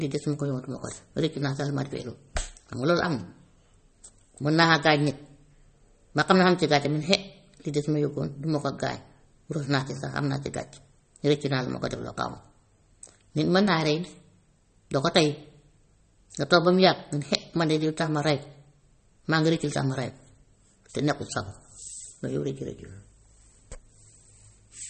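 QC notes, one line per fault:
Throughout, MP3 compression: nothing above 8.4 kHz, with watery, swirly sibilants and smeared attacks, likely from a low bitrate near 32 kbps starving the encoder.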